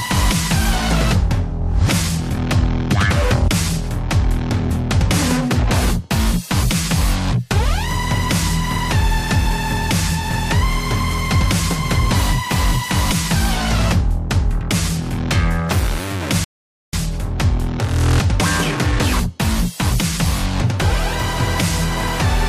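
At 16.44 s the sound halts in a rebuffering stall, the player's downloaded audio having run dry, then resumes at 16.93 s exactly where it left off, adding 0.49 s. A waveform shows a flat gap; a spectrogram shows a clean blank vertical band.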